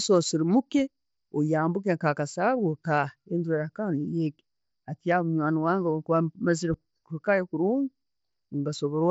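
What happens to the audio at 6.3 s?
Nothing goes wrong at 6.3 s: the speech continues intact through the Bluetooth mSBC headset path, which carries it with its usual limit of nothing above about 7.7 kHz.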